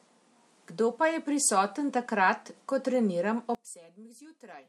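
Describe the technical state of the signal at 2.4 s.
At 2.4 s the signal is intact, with no audible fault at that moment.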